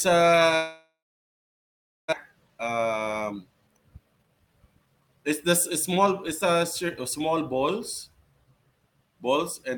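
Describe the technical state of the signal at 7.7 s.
At 7.7 s the speech signal is intact, with no audible technical fault at that point.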